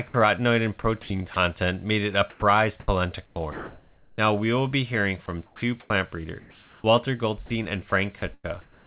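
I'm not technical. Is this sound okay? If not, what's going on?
No. From 0.08 to 0.14 s, the speech briefly gives way to a steady hiss for about 60 ms. This is sound dropped by the voice detector. The sender's system likely mistook part of the speech for background and stopped sending it for a moment.

Then comes sound chopped by the voice detector, in four stretches: 0.82 to 1.36 s, 2.3 to 4.18 s, 5.26 to 6.84 s, and 7.46 s to the end. The speech cuts in and out, and pieces are swapped for artificial hiss. Nearly a second goes missing between 2.3 and 4.18 s. The likely cause is the detector switching sending on and off repeatedly.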